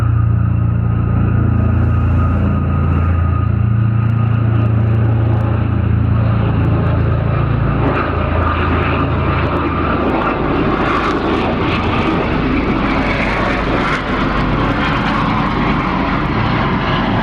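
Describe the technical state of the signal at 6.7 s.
At 6.7 s you're hearing gain pumping, and it runs through the whole clip. The level swings by around 10 dB, pulled down under each loud sound, squashing everything. It's likely the input gain was cranked way too high, with a fast limiter clamping down on every peak.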